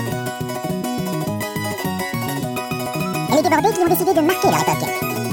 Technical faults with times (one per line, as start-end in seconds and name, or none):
0.00-5.32 audio read two samples at a time (double speed)